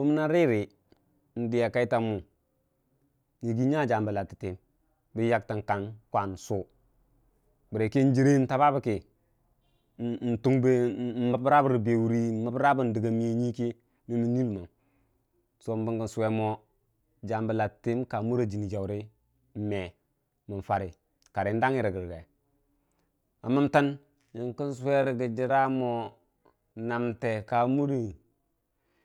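A time-stretched section runs from 23.97 s to the end of this speech recording at 29.05 s, where the pace abruptly drops to roughly 0.65 times normal speed while the pitch stays where it was. That slowed stretch drags, because short fragments of the signal are being repeated to fill the extra time. The likely cause is software lengthening the closing portion to fit a target duration while holding pitch constant.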